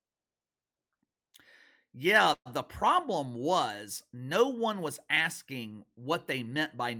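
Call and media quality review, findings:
Call audio freeze, 2.33–2.48 s, just before "the problem was no". Last sound stretched into a fading buzz, then about 60 ms near-silent. Likely jitter buffer underrun from delayed packets. Resumes intact, nothing lost, later speech pushed back 121 ms.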